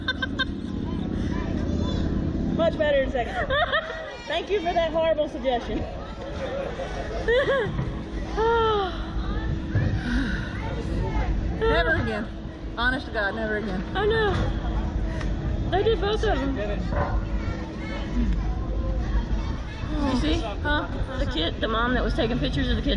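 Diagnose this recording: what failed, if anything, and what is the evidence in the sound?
Nothing in the recording stood out on listening that would point to a failure at any stage.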